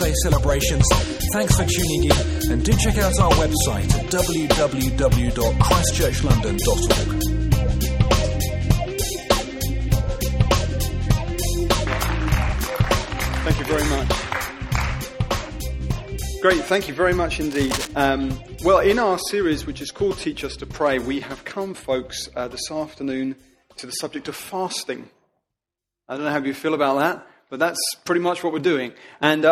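At 17.51 s a burst of cable scratch noise begins and runs until 17.93 s, lasting a little over 0.4 s. It is heard as a rough, uneven scratching and rustling laid over the sound, sitting roughly 10 dB below the main signal. The likely cause is a worn cable, connector or control being moved, its contact resistance fluctuating rapidly and injecting dense, irregular noise into the signal path.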